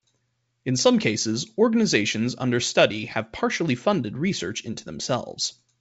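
No technical faults can be heard in the speech, which carries the band-limited sound of G.722 wideband telephone coding at 64 kbit/s, with nothing above 7.7 kHz.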